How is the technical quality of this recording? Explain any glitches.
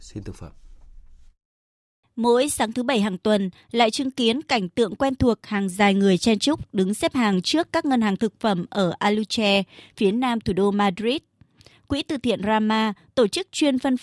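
Nothing in this speech recording stands out as a technical problem, so there's no glitch to explain here.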